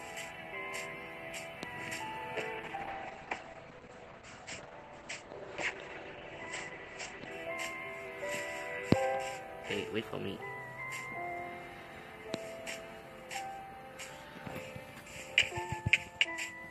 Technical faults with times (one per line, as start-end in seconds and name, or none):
2.58-7.37 call bitrate drop